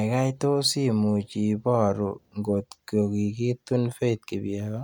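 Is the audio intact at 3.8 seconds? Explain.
Yes, the speech at 3.8 seconds plays through cleanly, with no dropout, click, distortion or other fault at that moment.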